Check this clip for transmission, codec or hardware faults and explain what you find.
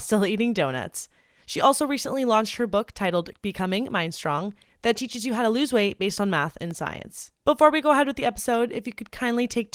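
Two brief dropouts are audible, both of the same kind, a block of digital silence, at 3.91 s and 6.71 s. Each lasts about 0.67 ms and 1.33 ms respectively, which fits blocks of 32 and 64 samples left unfilled when the output buffer wasn't written in time. The waveform snaps abruptly to near silence and back, and gaps this short are heard as a tick or dip rather than as silence. A spectrogram shows a thin vertical broadband stripe at each time.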